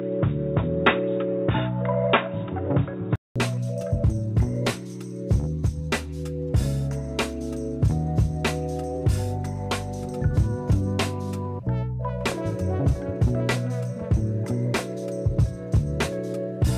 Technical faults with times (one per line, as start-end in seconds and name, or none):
0.00-3.36 input switched to a poorer device